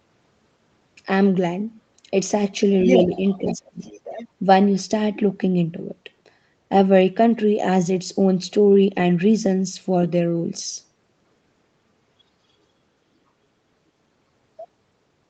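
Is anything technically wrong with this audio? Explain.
Yes. From 2.84 to 4.28 s, the other side's voice leaking through is audible, about 10 dB below the talker. This is likely residual loudspeaker echo the canceller missed.

This overlap also causes speech suppressed in double talk. The talker's level briefly dips slightly at 3.05–3.09 s, then drops by about 20 dB from 3.38 to 3.8 s. These are likely the canceller ducking both voices. Unlike a dropout, it happens only while the other side speaks. The call path's 8 kHz bandwidth limit plays no part in these faults.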